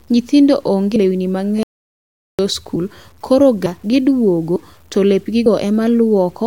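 Speech runs through the whole recording with a gritty, grainy edge that rises and falls with the voice, the mark of low bit depth without dither. The roughness sits around 40 dB below the signal and fits a likely 8-bit truncation. On a spectrogram it appears as a noise floor that follows the speech envelope, and the waveform shows visible stair-stepping in quiet passages. At 0.96 s and again at 5.46 s the sound skips forward, with audio missing between chunks. Roughly a tenth of a second vanishes at each point, likely lost at a one-second chunk boundary. The waveform shows an abrupt splice with no gap between the two sides, and the spectrogram shows a sudden vertical discontinuity. From 1.63 to 2.39 s there is an audio dropout to silence lasting about 0.86 s, likely the input being lost while recording continued. The waveform there is a flat line of silence, and the spectrogram goes completely blank with no room tone.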